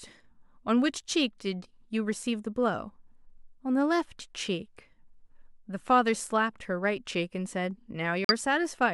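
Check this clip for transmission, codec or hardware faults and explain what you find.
One fault is present, near the end of the speech.

Corrupt frame muted, 8.25 to 8.31 s: damaged bits left compressed frames undecodable, so the player substituted silence. The result is an abrupt 60 ms gap, consistent with two lost frames of about 30 ms each, with timing preserved afterward.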